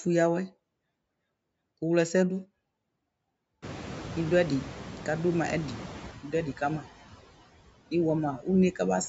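Across the whole recording the background sinks between phrases and swells back up under the speech. These are noise suppressor artifacts: a suppressor is pulling down, frame by frame, each frequency band it judges to be steady noise, by about 19 dB, so the residue keeps shifting as the bands open and close around the speech.

Around three and a half seconds the room noise jumps sharply, by about 21 dB, and from 3.62 s to 6.12 s it comes through noticeably louder than before, with only about 7 dB taken off, before settling back down. This is the noise suppressor catching up: its picture of the background was built on the quieter room, and it needed about 2.5 s to relearn the new, louder noise before cutting it properly again. Even after the rise the noise stays roughly 15 dB below the speech, and the call microphone processing leaves nothing above 8 kHz.

From 8.38 s to 8.47 s, a stretch of about a tenth of a second, a bit of the speech turns suddenly faint and swallowed, dipping by as much as about 14 dB before recovering. 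This is speech cut by the noise suppressor: for that brief moment it mistook soft speech energy for background and turned it down along with the noise, taking away part of what should have stayed at full level.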